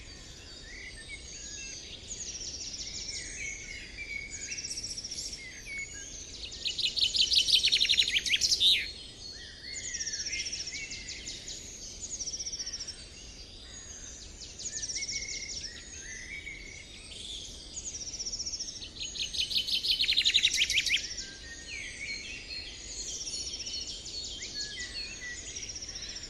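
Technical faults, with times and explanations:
Throughout, MP2 compression: the top end sounds dull and the remaining detail has a gurgling, granular roughness, clearly audible across the clip. This is likely the result of MPEG Layer II coding at a low rate, with the damage fitting about 80 kbps. The coder divides the sound into 32 sub-bands and shares out too few bits, so upper bands drop out or flicker and the bands that remain are coarsely quantised, producing that grain.
5.73–5.78 s and 11.21–11.31 s, DAB burbling: two short bursts, about 56 ms and 96 ms long, of noise blips in the sound. The damage spans only a few frames each time and fits small error rates of roughly 0.15 and 0.1 percent. Bit errors that slip past error correction corrupt samples and scale factors in the Layer II data, so individual sub-bands get short blips of noise or jump in level for up to a frame.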